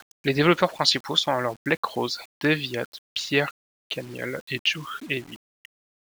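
A speech recording with grainy, signal-following distortion from start to finish, likely from low bit depth without dither, with rounding that fits about 7 bits. The grit sits around 30 dB below the speech, roughens quieter syllables, and makes decaying word endings sputter or drop abruptly to silence. Dithered low resolution would instead leave a steady hiss independent of the speech; here the error rises, falls and changes character with the speech itself.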